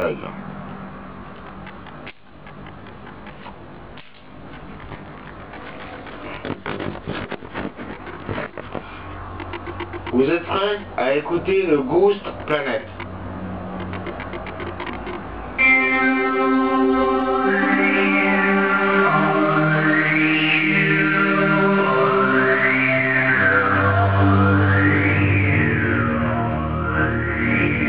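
Channel delay (comb filtering) runs throughout the clip. One channel arrives about 20 ms behind the other, and summing them to mono cancels shared content at evenly spaced frequencies starting near 30 Hz. With a lag that long, the sound comes across as rough or slightly doubled.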